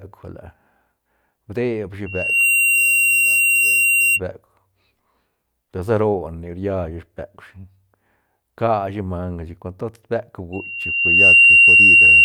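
Loudspeaker feedback squeal at 2.06 to 4.20 s, just after "deb shi", and again from 10.52 s to the end: a 2.8 kHz loop gain exceeds one, so the tone swells over a fraction of a second into a piercing squeal, the second louder and slower-building, well above the speech.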